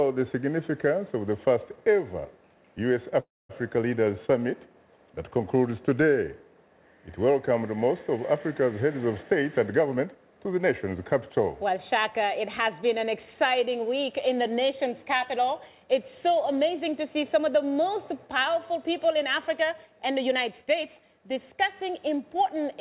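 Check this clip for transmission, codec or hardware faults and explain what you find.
Two transmission faults stand out, both on a narrowband call path where nothing is heard above 4 kHz, consistent with G.711 mu-law.

From 3.2 to 3.51 s the sound briefly carries on as a fading smear of the last moment, then drops to about 230 ms of silence before resuming exactly where it stopped. This is a call audio freeze, likely from delayed packets draining the jitter buffer. Nothing is lost, but everything afterwards arrives 293 ms late.

Between 9.33 and 11.66 s the audio sounds hurried, running at 112% of normal speed while the pitch stays the same. This is a jitter buffer speed-up: the receiver repeatedly cut out pitch-period-sized slices, removing roughly 300 ms to shrink its backlog.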